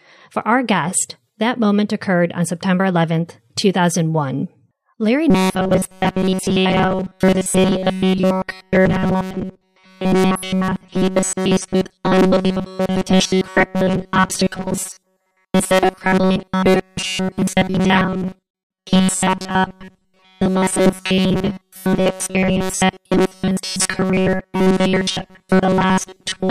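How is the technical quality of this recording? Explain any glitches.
The technical quality is poor from 5.30 s onward. From 5.30 s to the end of the recording, the speech turns into robotic sound from repeated short buffers. The likely cause is new audio arriving too seldom, so playback keeps looping the most recent fragment while the real signal is skipped, and this happens essentially throughout that stretch. The loop rate imposes a fixed buzz at about 188 Hz, which fits a repeated segment of roughly 5.3 ms. The speech becomes a rigid, metallic drone that only loosely tracks the original phrasing.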